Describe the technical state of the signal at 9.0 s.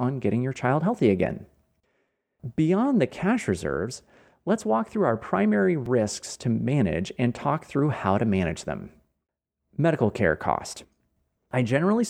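At 9.0 s the speech signal is intact, with no audible fault at that moment.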